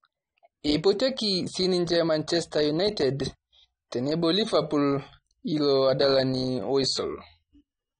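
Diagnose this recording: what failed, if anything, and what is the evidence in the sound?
The codec stage is where it went wrong: the speech sounds dull and smeared the whole way through, with a fizzy, warbling edge on sibilants. That's most likely AAC compression, with AAC-LC starved of bits, which fits about 32 kbps, so high bands get cut or patched with noise.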